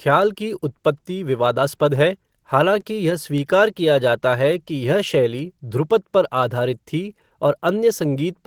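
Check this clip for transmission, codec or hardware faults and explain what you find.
There is one codec fault, present from start to finish. Opus voice compression runs in hybrid mode: linear prediction codes the band below 8 kHz and a transform layer covers the rest up to about 20 kHz. The excitation is coded coarsely, which fits roughly 16 kbps, so the speech turns plainly hoarse and slightly robotic.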